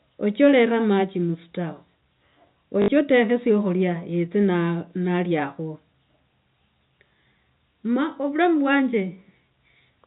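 A short robotic stutter, buzzing at about 50 Hz, breaks the speech from 2.82 to 2.88 s, before "otekhe syakhulya yotse". This is packet loss with the last packet repeated: 60 ms went missing, which fits three 20 ms packets, and the receiver replayed the last good one.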